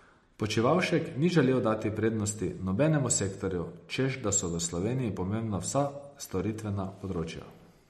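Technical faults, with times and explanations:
Throughout, MP3 compression: watery, swirly speech with treble cut above 13.2 kHz, likely a low-bitrate encoder zeroing weak frequency lines frame to frame.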